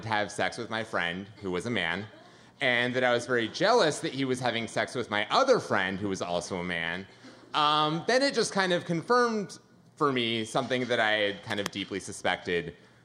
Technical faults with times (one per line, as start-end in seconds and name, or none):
11.50-11.68 cable scratch noise